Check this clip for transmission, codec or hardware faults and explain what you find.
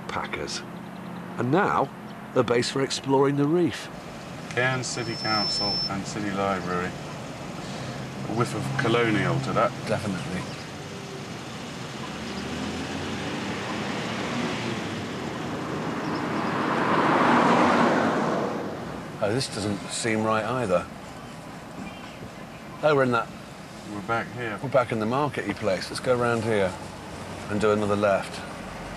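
One hardware fault is present: loudspeaker feedback squeal, from 4.93 to 5.92 s. A microphone picked up the loudspeaker it was feeding, and at 5.3 kHz the gain around that loop exceeded one, so the tone fed itself and kept rising. It is heard as a thin, piercing whistle that swells over roughly 0.4 s until it is about as loud as the rest of the sound, then stops.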